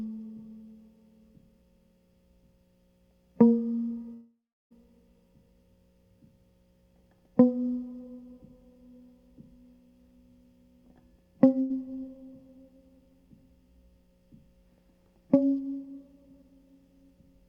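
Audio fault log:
4.13–4.73 s: long network dropout. The music stops arriving for close to 0.6 s and that stretch is never heard. The receiver carries the last sound forward as a buzz or hiss that fades. Roughly the final third of a second is silence before playback returns further along, so the passage in between is simply gone. This is likely a network interruption long enough that concealment ran out of material to extend.
11.61–11.72 s: burst of packet loss. About 0.1 s of the music goes missing in one short gap. The receiver fills it by stretching the preceding sound and turning it down as the gap continues, which leaves a brief fading smear instead of a hard cut. The audio then resumes further on with that slice absent, so the music jumps slightly forward.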